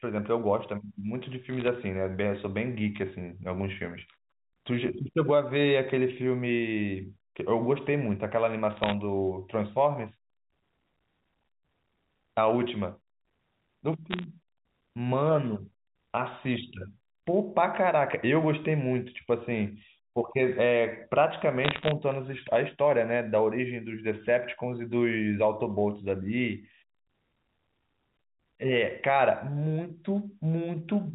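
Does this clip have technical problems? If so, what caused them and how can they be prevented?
Yes. Bit errors on a digital phone line put bursts of sharp crackle over the speech at 1.50–1.68, 8.71–8.94, 14.11–14.24 and 21.64–21.91 s. Flipped bits in the A-law samples, at a rate of roughly half a percent, turn single samples into ticks. The telephone band below 4 kHz stays intact. A clean digital link with error checking, or a retransmitting transport, would prevent it.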